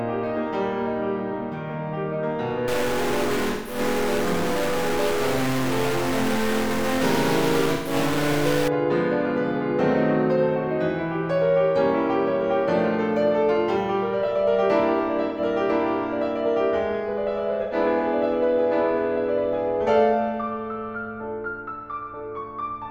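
A grainy or buzzy distortion lies over this music from 2.68 s to 8.68 s, a gritty edge that tracks the waveform. That sound points to a stuck bit, likely one data line or converter bit held at a fixed 0 or 1, so about half the sample values are pushed off by that bit's weight. Inside and after that stretch, four brief patches turn smeared, noisy or phasey, at 3.51 to 3.79 s, 7.73 to 7.93 s, 15.28 to 15.40 s and 17.63 to 17.75 s. This is AAC frame loss with concealment: the decoder lost data and filled the gap by reusing the last good spectrum with scrambled signs or interpolated energy, which gives that washed-out texture instead of a clean cut. The longest gap, about 171 ms, fits four lost frames; the 128 ms one fits three, and the two 85 ms ones fit two each.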